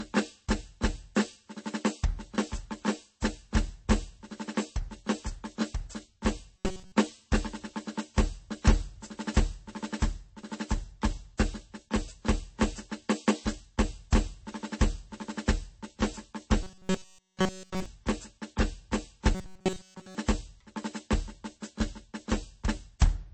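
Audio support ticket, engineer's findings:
Throughout: watery, swirly texture on the music, smeared attacks. Likely MP3 compression at a very low bitrate, around 32 kbps. Spectrogram: flickering holes where weak lines drop per frame.

6.57–6.93 s, 16.62–17.86 s, 19.35–20.15 s: rigid metallic buzz at 188 Hz, essentially all repeated material. Likely robotic sound from repeated short buffers of about 5.3 ms. Spectrogram: evenly spaced harmonic comb at 188 Hz multiples. Waveform: identical cycles repeating.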